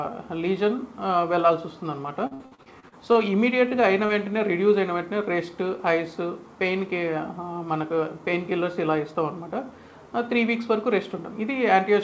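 Repeated packet loss (robotic sound) runs from 2.27 to 3.18 s: eight gaps, the longest 61 ms, are patched by extending prior sound, leaving about a third synthetic and choppy.

A short stall from a late packet at 3.69 to 3.74 s holds the sound about 20 ms longer while the buffer waits, losing nothing but adding a slight buzz or dip.

Short concealed packet loss at 4.06 to 4.12 s replaces 30 ms that never arrived with continued sound, heard as a quick wobble within the call path's G.722-style band, which has nothing above 8 kHz.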